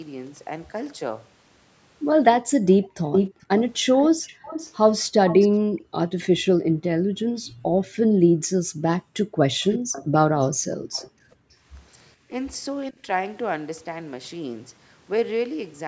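From 2.78 to 2.95 s, the room sound is pulled down. This is background gated by the echo canceller. While the far end played on the loudspeaker, the canceller cut the microphone gain hard. The background drops by about 26 dB, then springs back. It lasts only a moment, roughly 150 ms. It sounds like a brief hole in the ambience.

From 3.12 to 5.48 s, a delayed copy of the speech comes back. The copy trails by 430 ms. It sits only a little below the direct speech, so it is easy to hear. This is an echo leak. The likely cause is an echo canceller on a loudspeaker side that failed to remove what its microphone picked up and sent it back down the line.

From 5.6 to 11.67 s, the gating returns, and deeper. The background falls by up to about 40 dB. It comes and goes across this stretch, around three seconds in total. The room keeps vanishing and reappearing in a pumping way.

Inside that stretch, from 9.69 to 11.1 s, the echo leak comes back. 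This time the delay is 518 ms. The copy is much fainter, well below the speech, a ghostly trailing repeat.

From 12.27 to 13.08 s, the talker's speech dips. This is speech suppressed in double talk. It likely happened because both sides spoke at once, and the canceller turned down the near talker along with the echo. The level falls by about 20 dB in short bites, about a fifth of a second in total. The band ends at 8 kHz, as expected for call processing.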